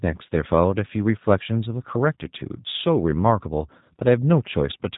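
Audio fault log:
throughout G.729 codec: the speech is resynthesised from a modelled vocal tract and pitch with only sparse pulses per short frame, so it sounds plainly rough and buzzy-synthetic, and nothing above 3.8 kHz survives. This fits an 8 kbit/s G.729A encoding.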